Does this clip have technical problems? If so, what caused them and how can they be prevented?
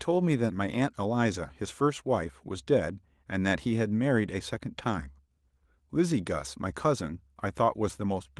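No, the speech carries no technical faults, and the Opus voice compression at 24 kbps in hybrid fullband mode leaves only light coding traces, so nothing here needs preventing.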